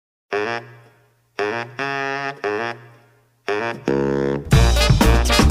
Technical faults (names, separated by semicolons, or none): none